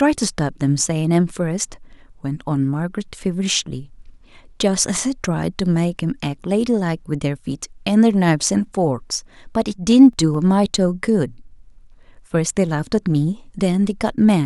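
From 9.71 to 10.77 s the speech carries CD scratch ticks: six short ticks, each lasting only a few milliseconds, spaced evenly at roughly five or six per second. A blemish on the disc wipes out more data than error correction can rebuild, once per revolution, so the player patches over the gap. The strict regularity tied to disc rotation separates this from random vinyl crackle or digital clicks.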